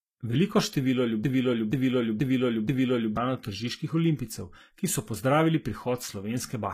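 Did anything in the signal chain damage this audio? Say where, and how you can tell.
Yes. Broken-record loop, 1.24 to 3.17 s: a 480 ms fragment of speech repeats exactly, back to back, four times. This points to a playback or streaming buffer, likely stalled, that kept resending the last block it held. The speech that should have played there is lost.

Low-bitrate audio saved at a high bitrate, throughout: the file is MP3, but nothing sounds above 14.9 kHz, and the first encoder's artefacts remain. This is a codec-stage fault, likely a lean HE-AAC encode near 20 kbit/s re-saved at about 192 kbit/s, which cannot restore what was stripped.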